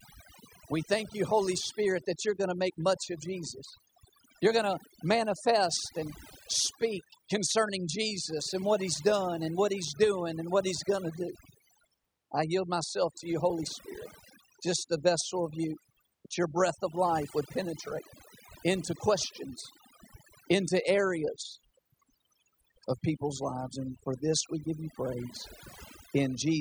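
A speech recording carries overdone noise removal from start to finish: an overly aggressive noise reducer gates frequency bands near its noise estimate, leaving near-silent gaps with twinkling specks. A spectrogram shows scattered isolated dots between words and patchy, hollowed-out harmonics.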